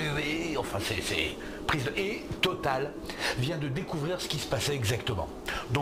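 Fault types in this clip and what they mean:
No audible technical faults turn up anywhere here.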